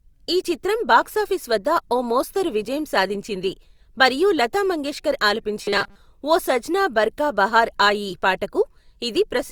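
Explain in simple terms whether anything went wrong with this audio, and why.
Yes, one spot goes wrong. From about 5.64 to 5.96 seconds the speech turns into a stiff, metallic buzz, what's called robotic sound from repeated short buffers. The buzz sits at a flat 200 Hz, which fits a tiny 5 ms slice of audio being replayed over and over. The likely cause is new audio arriving too slowly, so the player kept looping that last scrap and skipped most of the real sound in that stretch.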